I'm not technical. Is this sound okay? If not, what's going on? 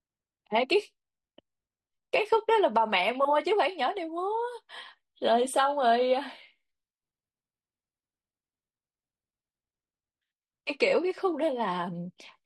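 No. From 5.61 to 9.61 s, it's an adaptive stream at a lower bitrate: the connection dipped, so the speech suddenly turns swishy with no gap.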